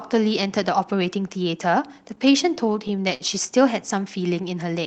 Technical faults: repeated stalls (stutter)

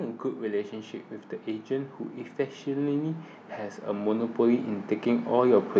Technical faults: automatic gain rising

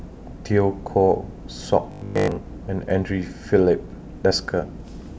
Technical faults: robotic sound from repeated short buffers

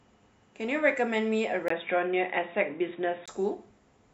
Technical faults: input switched to a poorer device

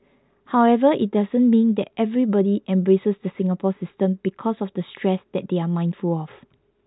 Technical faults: none

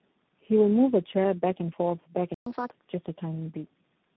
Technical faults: tandem speech coding; playback stall; catch-up at higher speed

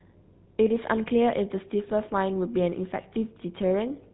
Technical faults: GSM full-rate codec

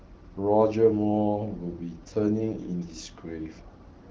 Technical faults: AMR rate drop

